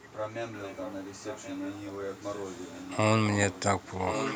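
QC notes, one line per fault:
0.60–0.94 s, 1.22–1.93 s, 2.15–2.90 s, 3.51–3.60 s and 3.78–4.36 s: echo leak. A delayed copy of the speech returns about 1.08 s behind the original. It is roughly 15 dB down in the first two stretches and about 20 dB down in the next two. In the final stretch it is only about 5 dB below, where it competes with the direct speech. The constant delay points to a far-end loudspeaker path, with an echo canceller that likely left residual microphone pickup and sent it back.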